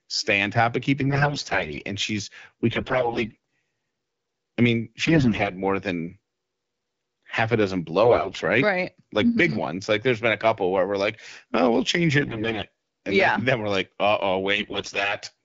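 AMR bit errors hit at 1.02–1.84, 2.70–3.35, 5.05–5.52 s (after "I mean"), 8.04–8.38 s (after "half a dozen"), 12.20–12.64 s (after "we'll change") and 14.56–15.16 s. Heavily corrupted low-priority bits misplace the excitation pulses and skew fine pitch and spectrum values, so pitch and level hold but the sound turns hoarse and gargly, without the gaps of lost packets.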